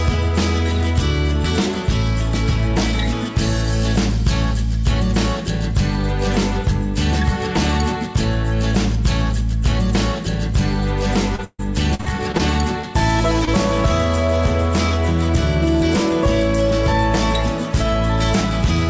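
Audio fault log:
11.36–12.41 s, repeated packet loss (robotic sound): six gaps, the longest 142 ms, covering about 28% of the stretch. Each is patched by extending the last sound, giving choppy audio with pieces missing rather than one isolated smear.
12.81–12.85 s and 13.45–13.49 s, short concealed packet loss: one 20 ms hole each, filled by continuing the preceding sound. Each gives a brief smear or wobble, not the sustained chop heard before 12.41 s. Audible content stops near 8 kHz, which fits a 64 kbps G.722 call path.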